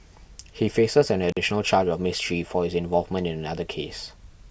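At 1.30 s the speech drops out briefly through an intermittent contact, ending by 1.37 s. A loose plug or cable lost connection for about 44 ms. The signal vanishes, leaving faint hiss, with a crackle as the contact breaks and again as it returns.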